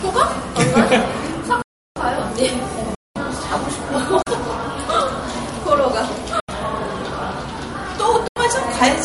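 Throughout, nothing sounds above 11.2 kHz and the texture has a swirly, smeared quality. The spectrogram shows a flat ceiling and blotchy high bands. This is likely low-bitrate MP3 audio saved at a high bitrate, so the original losses remain.

Blocks of digital silence cut in at 1.62–1.96 s (about 341 ms, which fits a 16384-sample buffer), 2.95–3.16 s (about 210 ms), 4.22–4.27 s (about 43 ms), 6.40–6.49 s and 8.28–8.36 s (both about 85 ms). Each is heard as a hole in the sound, and on the waveform it appears as a flat, near-silent stretch with abrupt edges.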